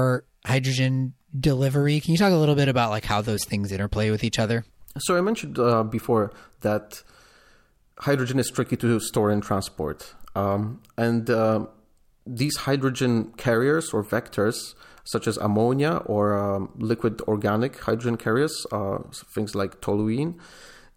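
Nothing here calls for a timestamp, since the speech runs along without any technical fault turning up at any point.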